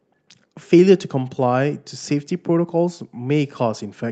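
No faults are audible in the speech; it carries the normal marks of call microphone processing, with the lowest bass filtered out and nothing above 8 kHz.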